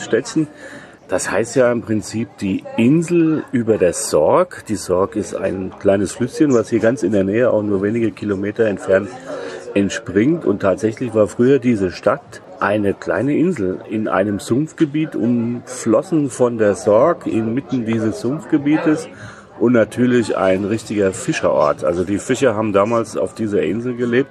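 No technical fault can be heard anywhere in this audio. There is nothing to mark at any point in the recording.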